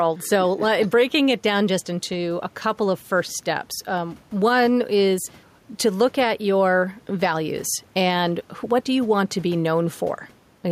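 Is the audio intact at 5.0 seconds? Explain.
No, at 5.0 seconds you're hearing gain pumping, and it runs through the whole clip. The mic gain is likely set far too hot, so a fast limiter clamps down on each loud syllable, then releases. The room noise sits about 35 dB under the speech, and the gain swings by around 5 dB, leaving everything squashed.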